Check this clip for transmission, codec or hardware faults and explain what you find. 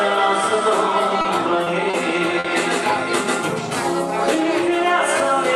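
Four short stalls from late packets occur, at 1.21–1.26 s, 1.64–1.68 s, 1.90–1.95 s and 2.39–2.46 s. Each time a packet missed its playout slot, the jitter buffer drained and the receiver held the last sound for about 30, 20, 30 and 50 ms respectively, then resumed at the same point once the packet came in. No audio is lost. Instead a sound lingers slightly too long, with a faint buzz or dip, and playout shifts later by the filled amount.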